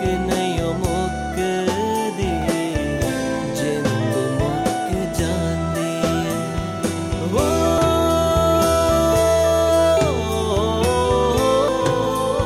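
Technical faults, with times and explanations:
7.78 s and 11.68 s, damaged data in a compressed stream: at each moment a short burst of wrong bytes reaches the decoder, which misreads the affected frame, loses sync and hunts for the next valid frame header, leaving a brief chirp or squawk. On a spectrogram each shows as a thin vertical smear of broadband or oddly tonal energy unrelated to its surroundings. The waveform shows a sudden discontinuity or a stretch of garbled samples.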